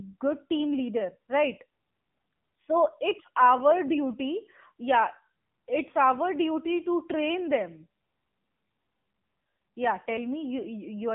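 Throughout, AMR narrowband mobile codec damage: nothing passes above 3.6 kHz, and the buzzy, synthetic texture suggests a low rate near 7.95 kbps, unlike a clean band-limit.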